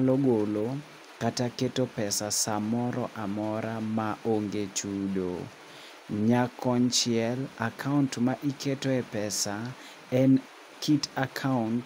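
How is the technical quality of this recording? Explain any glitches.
Nothing stood out on listening to this speech recording, and there are no glitches to explain.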